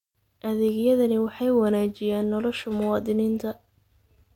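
At 1.61 s the speech switches abruptly, with no gap, to an adaptive stream at a lower bitrate until the end at 4.36 s. Codec artefacts rise, fitting a drop to roughly 32 kbit/s HE-AAC. A spectrogram shows a sudden ceiling, with nothing above 16.3 kHz.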